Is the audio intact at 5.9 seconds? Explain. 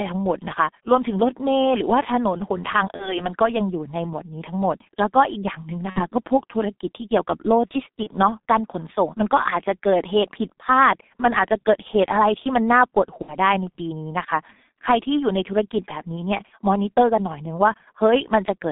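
No. From 5.90 to 6.03 s there is VoIP packet loss concealed by the speech codec. About 60 ms of data is missing, which fits two lost 30 ms frames. The decoder fills the gap by repeating its last pitch and filter at falling gain, so the sound smears into a fading buzzy tone or coloured noise. It stays degraded briefly after the stream resumes.

That moment also carries the G.723.1 codec damage present throughout. The band is limited to roughly 200 Hz to 3.7 kHz, and the heavy coding, consistent with about 6 kbit/s, leaves the speech muffled and hoarse with blurred consonants.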